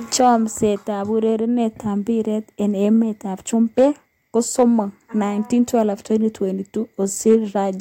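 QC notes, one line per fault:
0.15–0.29 s, 3.78–3.86 s, 4.38–4.63 s, 7.28–7.35 s: hard clipping. Speech peaks overran the stage's limit by about 2 dB and were cut flat, adding brief crackle.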